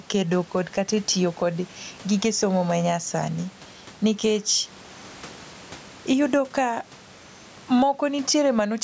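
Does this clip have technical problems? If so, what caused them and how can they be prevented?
Yes. Gain pumping runs through the whole speech clip. The room noise sits about 32 dB below the speech, and the level swings by roughly 10 dB. The likely cause is input gain set far too high, so a fast limiter or compressor clamps down on every peak and releases in the gaps, flattening the dynamics. Setting the microphone gain lower, with headroom below the limiter threshold, prevents it.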